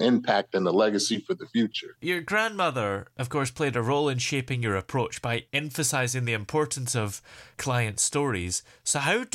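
No technical faults can be heard in the recording.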